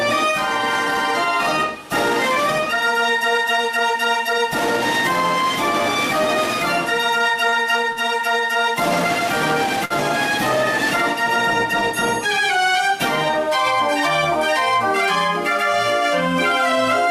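Short stalls from a late packet occur at 7.49–7.54 s, 7.92–7.98 s and 9.85–9.92 s. Each time the jitter buffer ran dry, so the last sound was stretched for 30, 39 and 52 ms before resuming unbroken. The result is a brief held smear with a slight buzz or dip.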